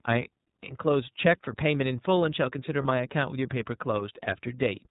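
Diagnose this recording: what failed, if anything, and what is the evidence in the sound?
The codec stage is where this went wrong: it's been through the iLBC codec, and the damage is plainly audible. Nothing gets past about 4 kHz, so the speech is narrowband and a bit dull, with that slightly rough, synthetic edge from each frame's excitation being rebuilt on its own. The character fits iLBC's 30 ms mode at around 13.3 kbps.

Then there's one lost iLBC frame at about 2.82 s, which points to a network problem, a dropped packet in transit. For roughly 30 ms the decoder fills the hole by repeating the last pitch cycle with some noise mixed in, so you get a brief held, faintly buzzy vowel instead of real speech. Since iLBC frames don't depend on their neighbours, the speech snaps back right after, with no smeared recovery.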